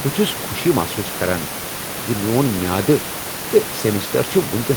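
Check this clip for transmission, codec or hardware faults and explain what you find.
Nothing stood out on listening to this speech clip; the room noise sits about 11 dB below the speech and belongs to the recording rather than to any fault.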